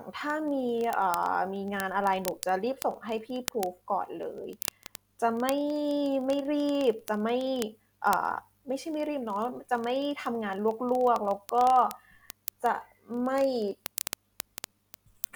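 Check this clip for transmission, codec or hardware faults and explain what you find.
One fault runs through the whole recording: word clock ticks, from 0.12 s to 15.33 s. The receiving device's clock runs around 700 ppm off the sender's, so a single sample slips roughly every 30 ms. That gives hundreds of sharp ticks under the speech, showing as evenly spaced thin vertical lines on a spectrogram and tiny step glitches in the waveform.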